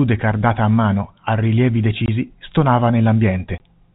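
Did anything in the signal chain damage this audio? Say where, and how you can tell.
Yes, at the network stage: packet loss filled with silence. Right after "a mano a rilievi" the speech drops out from 2.06 to 2.08 s, and again from 3.58 to 3.60 s. Each 20 ms gap, which fits one lost packet, has hard edges against the telephone-band G.711 audio.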